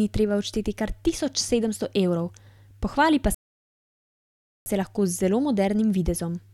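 At 3.35 s, right after "pohvali pa", the speech drops into silence and stays there until 4.66 s, when it picks up again with "se lahko". This is a rebuffering stall: playback ran ahead of the downloaded audio, so the player halted and waited for more data. When it resumed, it continued from the exact point where it stopped, so no speech is missing. The gap simply inserts about 1.3 s of dead air.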